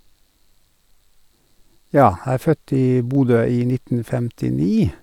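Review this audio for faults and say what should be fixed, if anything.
Audio missing between chunks: the recorder likely lost samples switching 2-second chunks, so about 20 ms of speech skips at 3.15 s, after "er født i". Overlap or double-buffer the chunk handover so the next block is already capturing before the previous one closes.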